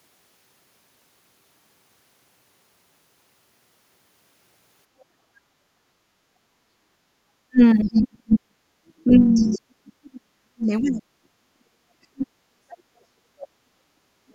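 At 5.26 s the room sound behind the speech dips. This is background gated by the echo canceller. The canceller heard its loudspeaker playing and pulled the microphone down, by about 7 dB at the deepest. The dip lasts until 5.69 s, roughly 400 ms in all. Then the ambience comes back as the canceller releases.

From 7.49 s to 8.58 s the talker's speech is pulled down. The deepest losses are around 40 dB, and they add up to under a second. This is likely speech suppressed in double talk. With both ends talking, the canceller could not tell the local talker from loudspeaker echo. It attenuated everything together.

Inside that stretch, from 7.83 s to 8.36 s, a second, fainter voice is heard. It sits about 20 dB under the speech. This is the other side's voice leaking through. The canceller likely left a residue of the loudspeaker signal in the microphone. It returns from 8.88 s to 9.61 s, louder this time, around 15 dB below the speech. 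Again the cause is likely incomplete echo removal.

Suppression in double talk likely returns from 9.04 s to 12.31 s. The talker's level dips, with drops near 40 dB, for about 3 s in total. It happens again from 12.66 s to 14.33 s. Each time the talker's level falls by up to about 40 dB. Here the affected stretches add up to about 1.5 s. The cause is likely the same double talk.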